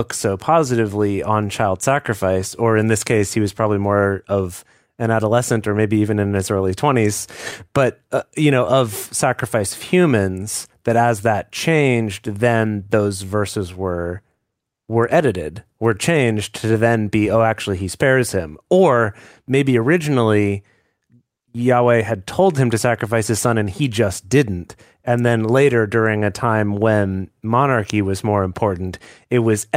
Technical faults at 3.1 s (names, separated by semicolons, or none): clock drift between sender and receiver; repeated timing corrections